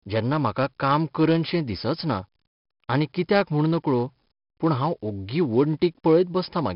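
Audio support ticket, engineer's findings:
Gritty hiss riding on the speech level, full clip, with grainy distortion on sharp consonant onsets. Probable component: 4-bit ADPCM compression, heavy damage. Step size can't track fast attacks. Nothing above 5.3 kHz, dull top end, which fits an 11 kHz sample rate at about 44 kbps.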